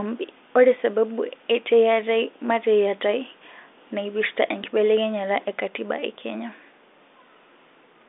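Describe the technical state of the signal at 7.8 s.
At 7.8 s the audio is intact, with only the narrow telephone band of the G.726 link, whose 40 kbit/s coding leaves little or no audible hiss and passes nothing above about 3.8 kHz.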